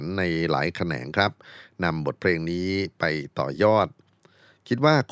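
No technical faults can be heard anywhere in this speech recording.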